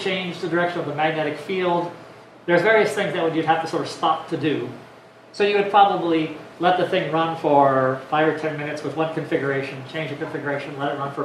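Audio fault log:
No faults can be heard anywhere in this clip. Nothing in the audio stands out as a technical problem.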